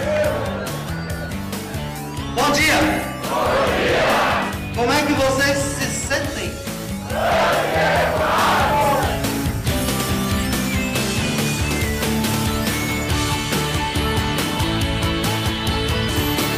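A feedback whistle enters at 12.95 s and runs to the end of the clip at 16.58 s: a thin, steady tone at 3 kHz sitting behind the sound, roughly 15 dB below it, swelling and fading slowly in level. The likely cause is a loudspeaker-to-microphone loop hovering right at the edge of feedback. One frequency gets just enough gain around the loop to keep ringing, but not enough to build into a runaway howl.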